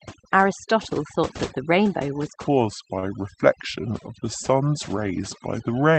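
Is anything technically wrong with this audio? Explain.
Yes, three faults are audible in this speech.

Overdone noise removal runs throughout. A denoiser set far too strong gates individual frequency bands whenever they approach its noise estimate, stripping quiet speech detail too. The voice sits over a near-silent background with twinkling specks. A spectrogram shows blank gaps speckled with isolated dots and ragged, hollowed-out harmonics.

From 2.48 s to the end, a section plays at the wrong speed: about 0.745 times normal, which drops pitch by roughly five semitones. This is likely from the audio being fitted to the wrong clock. The voice turns deep and dragging. On a spectrogram the harmonics sit visibly lower and the syllables stretch wider than in the first part.

At 2.99 to 3.05 s, within that slowed section, there is a short stall from a late packet. The jitter buffer ran dry, and the receiver stretched the last sound for about 32 ms until the packet arrived. 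Nothing is lost, but a sound hangs with a slight buzz or dip. The waveform shows a briefly repeated, flattened cycle pattern.

The call path's high-frequency ceiling near 8 kHz is also visible as a flat cutoff line across the spectrogram.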